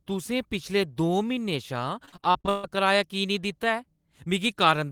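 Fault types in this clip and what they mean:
Repeated packet loss (robotic sound): from 2.05 to 2.65 s the speech breaks into nine gaps, the longest 140 ms, each patched by extending the previous sound across about half that span. Unlike a single dropout, the holes recur back to back, giving a choppy, robotic stutter.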